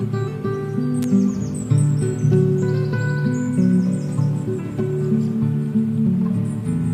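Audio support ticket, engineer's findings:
Sharp snap at 1.03 s, gone in under 20 ms. Reads as an electrical switching spike: short arc riding on top of the sound, peaking around -10 dBFS. Likely a nearby switch, motor or static discharge coupling into the audio line. Single event, no follow-up clicks. Worth checking cable routing and grounding near whatever kit was switching at that moment.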